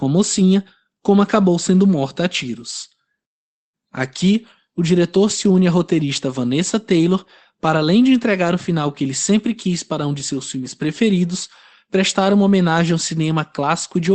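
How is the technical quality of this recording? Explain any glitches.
No glitches are audible: the speech carries the coded, band-limited character of an Opus call path, with the top end stopping at about 8 kHz.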